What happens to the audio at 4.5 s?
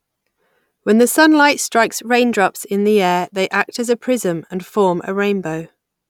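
Nothing goes wrong at 4.5 s: the speech runs on without any break, glitch or change in level there.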